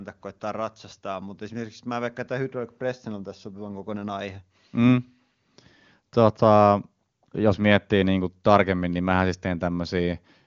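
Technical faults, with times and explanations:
The speech comes through an AMR wideband (HD Voice) path whose content stops at about 7.3 kHz, with none or only faint coding damage, which fits the codec's top rate of around 24 kbit/s.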